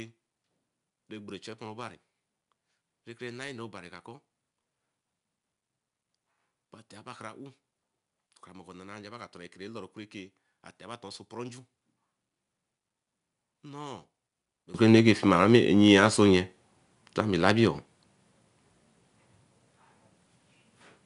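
From the start to 14.74 s the speech sits about 22 dB lower than it should, leaving only a weak residue of the speech. This is likely one channel inverted: a polarity-reversed stereo channel cancels most of the shared sound when folded to mono.

Throughout the clip there is plainly audible 4-bit ADPCM compression: a gritty hiss rides on the speech and follows its level, with nothing above 10.6 kHz. Each sample is coded as a coarse 4-bit step from a prediction, which fits a rate near 89 kbps.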